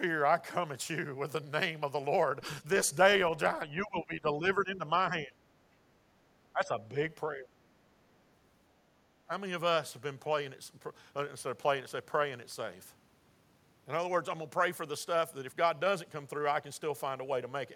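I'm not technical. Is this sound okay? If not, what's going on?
No. The speech goes noticeably quieter, even briefly ducking away, at 3.65–4.91, 5.10–5.36, 6.53–6.82, 7.35–7.52 and 9.27–9.31 s. That's speech suppressed in double talk: likely the echo canceller mistaking this talker for echo while the far side spoke, and turning both down.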